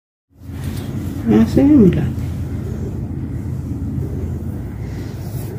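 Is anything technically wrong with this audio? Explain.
No, nothing is technically wrong with this audio. It opens with a smooth fade-in that begins at about half a second and reaches full level by 0.85 s, with no click or hard edge.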